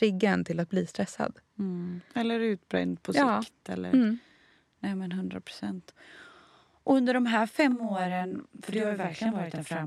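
Right after "under de här", at about 7.71 s, you get channel delay (doubling) that runs through to the end of the clip. One side of the stereo pair is arriving about 40 ms behind the other, which fits a stuck or oversized buffer on that channel. When the two get folded to mono, the late copy sits right behind the original at the same level, so the speech sounds doubled, almost like a tight slapback echo.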